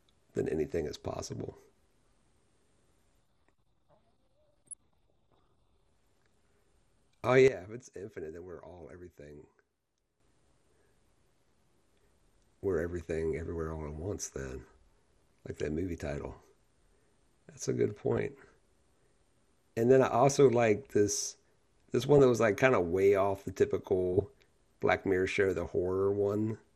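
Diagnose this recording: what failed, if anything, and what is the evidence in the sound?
Codec stage: the speech is dull and gurgling throughout, with upper bands flickering. This is likely MP2 compression, consistent with an 80 kbps stream.

Reception and decoding: DAB burbling at 1.54, 4.67, 18.12, 22.01 to 22.19 and 24.13 s gives brief blips of noise. Bit errors are corrupting individual sub-bands for a few frames.

Gain processing: a sudden gain jump from 7.48 to 10.20 s drops speech and noise together by about 12 dB before snapping back. This is likely an unramped digital gain change.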